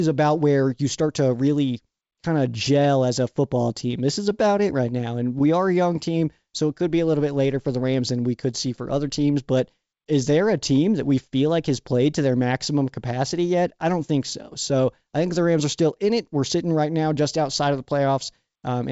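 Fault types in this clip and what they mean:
No faults present.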